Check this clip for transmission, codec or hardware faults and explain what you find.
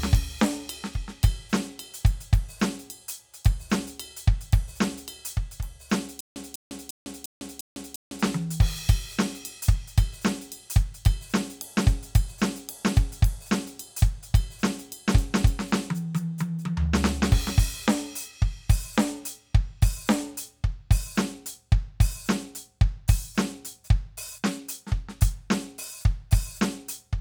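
One fault is present in the music: a stutter with silent gaps from 6.21 to 8.22 s. A 197 ms fragment repeats six times, each followed by about 154 ms of digital silence, every 350 ms. This is likely a stalled stream replaying its last buffer at each retry. Unlike a simple dropout, the same burst returns at a steady pace. The music that should have filled that stretch is lost.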